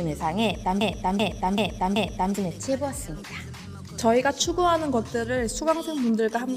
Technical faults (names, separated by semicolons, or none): broken-record loop